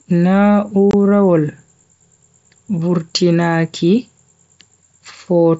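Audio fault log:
0.91 to 0.94 s, unconcealed Bluetooth headset packet loss. The speech stops dead for 22.5 ms, a gap that fits three lost wideband headset frames. No repair fills it. Silence or an idle pattern takes its place, so the hole has abrupt edges.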